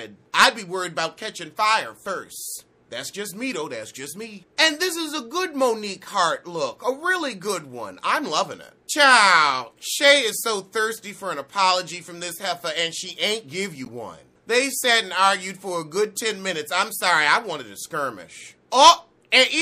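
From the start and throughout, the sound is watery and swirly, with a dull top end and smeared attacks. This is plainly audible MP3 compression, likely from a low-bitrate encode that fits 64 kbps. Short of bits, the encoder cuts the treble at a fixed frequency and drops weak spectral lines that flicker on and off between frames. On a spectrogram this shows as a flat ceiling across the whole clip, with speckled, patchy holes below it.

At 3.50 to 3.55 s comes a brief chirpy blip from a corrupt frame decoded. Flipped bits in a couple of compressed frames led the decoder to place energy at frequencies that don't belong there. The burst reaches a moderate level, about −25 dBFS at its peak. A spectrogram shows a narrow vertical block of stray energy about 50 ms wide, unrelated to the surrounding content. The waveform shows a small burst of added hash.

At 13.85 to 13.91 s a second corrupt frame decoded is heard as a similar squeak, slightly longer because the damage spans a few frames. 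Its misread gains and codes again scatter energy into the wrong bands, peaking around −25 dBFS. It appears as another roughly 60 ms vertical smear on the spectrogram and a short ragged patch in the waveform.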